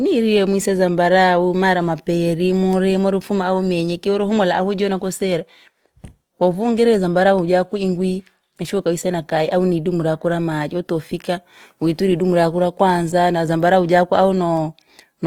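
Throughout, the speech has a grainy, rough texture with noisy fill in the upper bands, consistent with a low bitrate around 24 kbps, likely Opus compression in its music mode; content extends to about 20.3 kHz.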